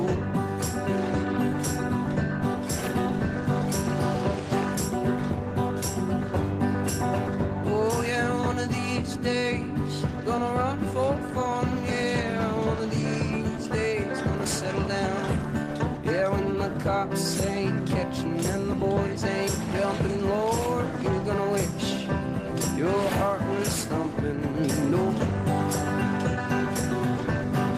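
No technical faults can be heard anywhere in the clip. Nothing breaks into the audio at any point.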